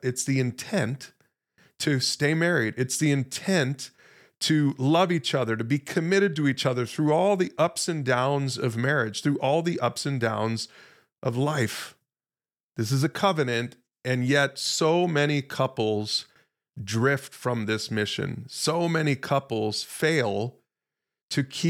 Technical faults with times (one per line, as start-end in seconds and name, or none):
none